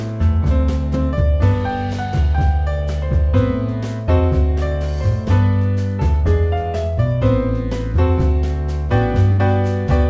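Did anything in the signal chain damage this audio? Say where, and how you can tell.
Yes, at the network stage: a burst of packet loss at 9.32 to 9.40 s. About 60 ms of audio was lost or arrived too late to play. The receiver concealed the gap by extending the last sound and fading it, then resumed later, with the lost stretch skipped. The G.722 call path caps the band at 8 kHz.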